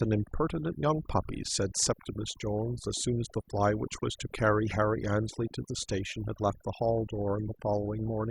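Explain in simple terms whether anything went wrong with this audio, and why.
Something did go wrong: the recording suffers from overdone noise removal, and it affects the whole clip from start to finish. A noise reduction tool was pushed too hard. It shuts off narrow slices of the sound wherever they resemble the background noise, and it takes the softer parts of the speech along with the noise. The result is a background that drops away and breaks up into twinkling specks.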